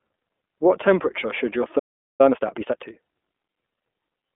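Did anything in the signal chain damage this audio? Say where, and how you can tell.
Yes, two stages left marks. At the codec stage, it's iLBC the whole way through: nothing above 4 kHz, a 250 Hz to 3.5 kHz telephone band, and that rough, slightly synthetic grain from coding each 20 ms frame independently, which fits the 15.2 kbps mode.

At playback, there's a stall from 1.79 to 2.21 s. The speech just stops dead for about 0.4 s mid-flow and then resumes. The player most likely ran dry or had its thread blocked, so the output went silent until it recovered.

Right after that, from 2.21 to 3.01 s, you get time-compressed catch-up. The speech runs about 1.5 times fast at normal pitch, because the player is cutting and cross-fading small chunks to burn off the backlog from the stall.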